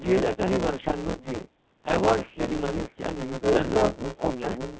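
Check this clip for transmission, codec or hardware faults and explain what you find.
Several faults are present in this speech clip: two run the whole way through, and three are confined to short moments.

Codec 2 vocoder, throughout. The sound is heavily synthetic, robotic and buzzy, which fits Codec 2 at about 1.3 kbit/s. The decoder never receives the waveform, only pitch, voicing, energy and a spectral envelope, and rebuilds the voice from sine waves. This differs from an ordinary low-bitrate codec, which smears or garbles the real waveform. Here the whole voice has been replaced by a parametric imitation, so even clean stretches sound artificial.

Buffer tearing, throughout. A steady rattle at 125 Hz rides on the sound whenever there is signal and stops in silence. That repeat rate fits a 128-sample buffer. The writer and the hardware reader have slipped, so part of each period, roughly a third, replays audio from around 15 ms earlier, with hard joins at each edge. 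The vocoder's buzz follows the talker's pitch, but this rattle stays locked at one fixed rate.

Bit errors on digital voice radio, 0.77 to 0.91 s. For a moment the synthetic voice jumps erratically in pitch, level and tone colour and breaks into warbling, bleepy gibberish. In a vocoder this low in rate, each corrupted bit sets a parameter for a whole frame, and the brief burst points to a high error rate. Unlike a dropout, sound continues throughout the burst, but it is nonsensical.

Speech suppressed in double talk, 3.72 to 3.86 s and 4.17 s to the end. The voice dips sharply, down to near silence, in a short patch and then over most of the last 0.6 s. The likely cause is an echo canceller turning down its own talker because the far side spoke at the same time. Codec frame loss would produce glitches or repeats, whereas here the level is simply pulled down for the duration of the overlap.

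Echo leak, 4.19 to 4.27 s. A brief, delayed copy of the voice surfaces about 286 ms behind the original and only slightly quieter. The likely cause is a loudspeaker path at the other end whose echo canceller let part of the pickup through. The 286 ms delay identifies it as a returned copy rather than room reverberation, which would trail off smoothly instead of repeating the voice as a distinct copy.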